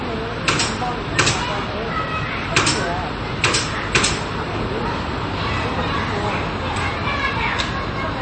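Throughout, nothing is heard above 8.4 kHz and the texture turns watery and swirly, consistent with likely MP3 compression at a low bitrate around 32 kbps.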